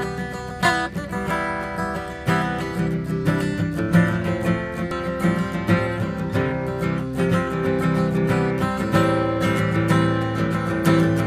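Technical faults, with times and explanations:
4.91 s: damaged data in a compressed stream. A brief blip where corrupted bytes made the decoder misread a frame, lose sync and hunt for the next header.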